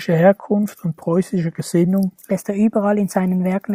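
At 2.31 s the speech abruptly shifts into a section at the wrong speed that runs to the end of the clip at 3.75 s. Playback there is 1.17 times the original rate, so the voice becomes hurried and rises by about three semitones, with timing and pitch changing together at the boundary. The likely cause is that this portion was rendered or played against a mismatched clock, stretching neither time nor pitch independently.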